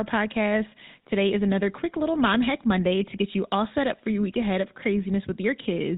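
From start to finish the speech carries GSM full-rate codec damage, and it is plainly audible. The codec rebuilds the voice from a vocal-tract model driven by sparse, regular pulses. Nothing above 4 kHz survives. The result sounds buzzy and gravelly, which fits a 13 kbps GSM stream.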